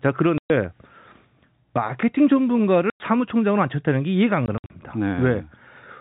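Telephone-band speech with packet loss filled with silence: hard-edged dropouts at 0.38–0.50 s, 2.90–3.00 s, and 4.46–4.70 s, where 120 ms goes missing in runs of up to 60 ms. Gap lengths fit 20 ms packets. Waveform and spectrogram show flat, empty slots with abrupt vertical edges.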